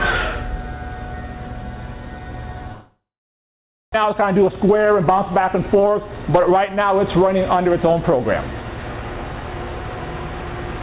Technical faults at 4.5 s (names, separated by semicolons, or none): jitter buffer speed-up